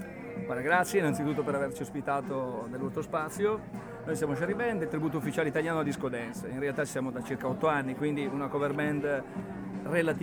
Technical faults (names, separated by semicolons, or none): none